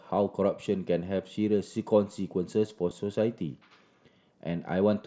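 At 1.18 s and again at 2.9 s there is concealed Bluetooth headset packet loss, each a single dropout of about 7.5 ms, which fits one lost headset packet. The receiver patched each gap by repeating a matching stretch of the preceding waveform, so each is barely audible. On a waveform the patch shows as a short, near-periodic copy of the cycles just before it. On a spectrogram it appears as a brief stretch where the harmonics simply carry on unchanged. The mSBC headset link itself carries the speech with its band topping out at 8 kHz.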